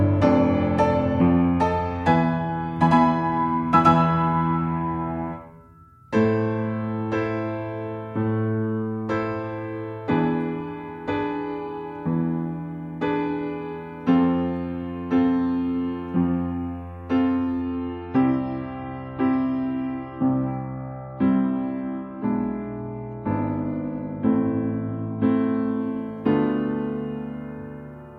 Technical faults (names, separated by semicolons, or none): adaptive stream at a lower bitrate